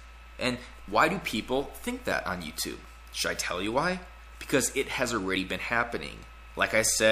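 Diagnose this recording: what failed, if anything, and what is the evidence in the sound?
At 5.36 s there's a sudden jump in the sound with no gap, so this looks like a driver or buffer problem, likely a dropped buffer (overrun). The capture side wasn't read in time, around 40 ms got overwritten, and the two edges were butted together.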